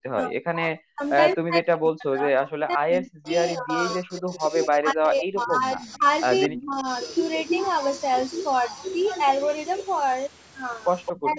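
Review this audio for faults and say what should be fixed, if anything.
Speech suppressed in double talk: the speech repeatedly drops away, by as much as about 40 dB, between 0.0 and 1.03 s and again from 1.36 to 6.05 s. Shallower dips follow at 6.47 to 6.87 s (about 25 dB) and 11.23 to 11.38 s (about 10 dB). The likely cause is an echo canceller that could not tell the near talker from loudspeaker echo while both sides spoke, so it attenuated everything. Prevention: use a canceller with proper double-talk detection and a gentler suppressor.

Echo leak: a faint copy of the far side's speech returns about 214 ms late at 4.17 to 4.65 s and 5.46 to 5.97 s, sitting roughly 15 to 20 dB below the speech. It comes back louder, about 10 dB down, at 6.47 to 6.65 s and 11.05 to 11.38 s. This is likely residual loudspeaker pickup that the canceller failed to remove at a loudspeaker endpoint. Prevention: improve echo-path modelling there, or have that participant use a headset.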